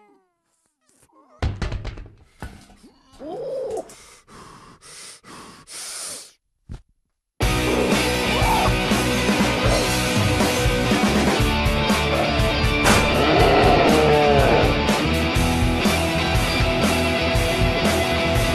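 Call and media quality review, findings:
No audible faults found.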